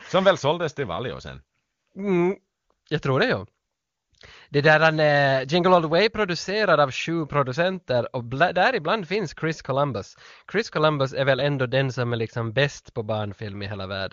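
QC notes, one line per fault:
No faults to note in this speech clip.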